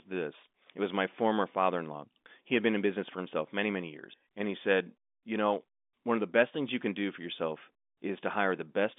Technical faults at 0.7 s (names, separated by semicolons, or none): none